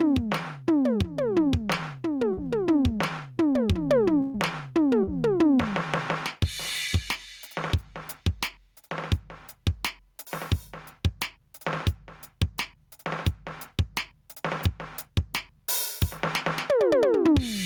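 Gain pumping runs through the whole music clip. The level breathes: the background swells up in the quieter stretches, then drops sharply each time a loud sound arrives, a swing of around 15 dB. Loud and soft passages sit unnaturally close together, and the result sounds squashed and restless. The likely cause is input gain set far too high, with a fast limiter or compressor clamping down on every peak and releasing in between.

At 2.33 to 2.39 s there is a short concealed packet loss. About 40 ms of audio did not arrive in time, and the receiver filled roughly 37 ms of it by extending the preceding sound before crossfading back into the real signal. It is heard as a brief smear or wobble in the music.

A burst of packet loss follows at 4.21 to 4.36 s, with about 120 ms missing. Concealment stretched the last sound across roughly 128 ms, holding it and fading it as the gap goes on, with no dropout to silence. 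Playback then resumes further along, so the material from that span is simply absent and the music jumps forward.

A second short concealed packet loss occurs at 5.03 to 5.09 s, again about 40 ms lost and 37 ms filled, producing the same brief smear.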